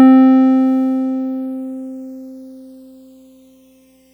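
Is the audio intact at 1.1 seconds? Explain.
No, at 1.1 seconds this music is already affected by channels drifting apart, which runs through the whole clip. The two sides seem to sit on separate clocks, roughly 100 ppm off, so their delay creeps toward about 0.4 ms, sweeping comb notches and giving a slow flanging feel.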